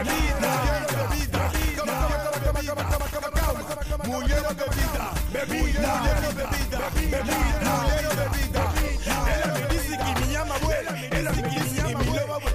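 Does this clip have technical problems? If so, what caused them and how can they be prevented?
Yes. A doubled audio track runs throughout: a dry, full-band copy trails the original by about a second and a half, around 5 dB quieter. It's likely from a second, slower capture path. Check your routing so each source gets recorded just once.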